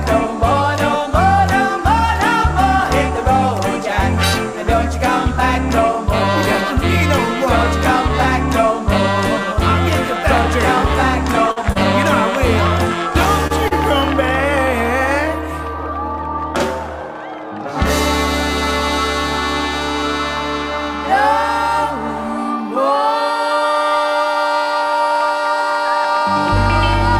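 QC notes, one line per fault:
11.51–11.58, 11.72–11.77, 13.47–13.52 and 13.68–13.73 s, short stall from a late packet: the sound hangs for a moment with a faint buzz or dip, then carries on with nothing skipped. Each time a packet arrived late, the jitter buffer ran dry. The receiver stretched the last bit of audio to cover the gap, about 49, 30, 27 and 30 ms, and resumed from the same point, pushing everything after slightly later.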